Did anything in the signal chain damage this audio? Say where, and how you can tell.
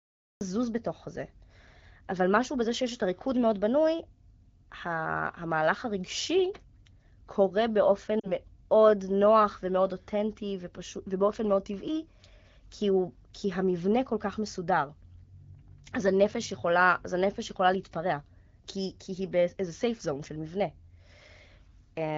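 Yes. Cut-off start at 0.41 s: the recording or stream began late, so sound emerges abruptly from digital silence without a natural attack. This is a capture or storage stage fault.

Lost AMR speech frames from 8.19 to 8.34 s: about 40 ms went missing over the radio link, so the AMR-WB decoder extended the last good frame, faded it, then recovered roughly.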